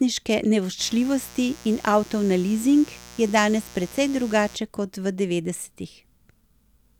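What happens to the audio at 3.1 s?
At 3.1 s the speech sits on top of a mains buzz that runs from 0.77 s to 4.58 s. Sharp switching spikes on a 60 Hz supply, arriving twice per cycle, leak into the signal and spread harmonics of 60 Hz up into the kilohertz range, so the intrusion sounds raspy rather than smooth, roughly 20 dB below the speech. That bright, edged texture separates it from plain hum, which stays a dull low tone.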